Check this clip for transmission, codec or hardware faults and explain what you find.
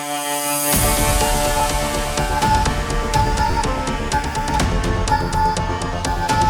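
Three short stutters come from a repeated buffer fault, at 1.60 s, from 3.51 to 3.53 s, and at 5.10 s. Each is a brief click or buzz where a tiny slice of sound plays twice, and three times at 3.51 s, with a hard join at every repeat. The repeated piece lasts about 10.7 ms, which fits a 512-sample buffer. New audio arrived late, so the device replayed its last buffer. Nothing appears to be skipped afterward.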